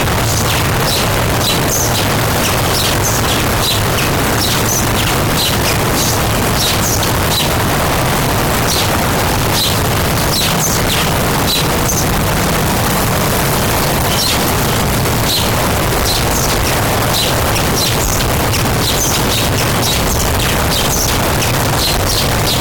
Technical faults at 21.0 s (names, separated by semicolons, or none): float read as integer